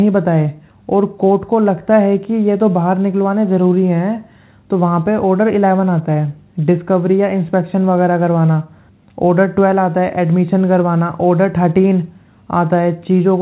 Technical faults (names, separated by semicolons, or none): none